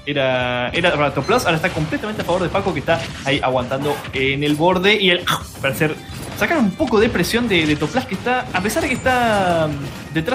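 At 0.95 s and again at 6.06 s, a corrupt frame decoded produces a brief squeaky blip. Damaged bits in what sounds like a couple of compressed frames were decoded anyway, putting energy at the wrong frequencies. The first blip peaks around -15 dBFS and the second is much fainter, near -30 dBFS. On a spectrogram each shows as a thin vertical smear of misplaced energy; on the waveform, a short jagged spike.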